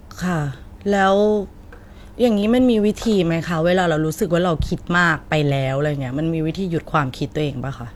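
No technical faults can be heard anywhere in this speech recording; the signal stays continuous and stable throughout, with no audible disruption at any point.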